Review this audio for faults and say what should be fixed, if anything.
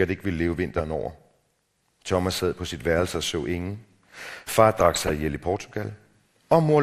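MP2 compression, throughout the clip: the speech sounds dull and plainly gurgling, with a grainy edge and upper frequencies that come and go. This is likely the work of an MPEG Layer II encoder that had too few bits to share across its 32 sub-bands, so it shut off the upper bands and quantised the rest coarsely. The degree of damage fits a rate of around 80 kbps. Encoding at a higher bitrate, or with a more efficient codec, would prevent it.

DAB burbling, from 4.80 to 5.13 s: for about a third of a second a burbling texture rides over the speech across 18 frames. Bit errors, at a rate of a fraction of a percent, got past the error correction and corrupted samples in the MP2 data, so short blips of noise appeared in single sub-bands. Better reception, or capturing the source before it went over the air, would prevent it.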